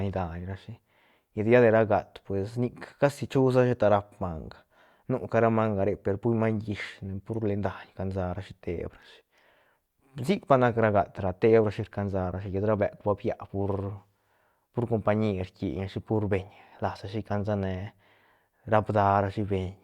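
No dropouts, clicks, distortion or other technical faults can be heard anywhere in the speech.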